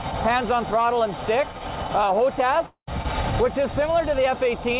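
From 2.66 to 2.89 s the audio drops out, and the likely cause is a long network dropout. The last sound before the gap is continued as a fading buzz for about 0.21 s, ending in silence over roughly the final 0.1 s, and about 0.22 s of the original audio never returns. On a waveform this shows as an envelope that decays into a flat stretch before the signal resumes abruptly. On a spectrogram it appears as smeared, repetitive bands thinning into a blank column. Throughout the clip a call path consistent with G.711 A-law at 64 kbps leaves nothing above 4 kHz, so the spectrogram is empty above that line.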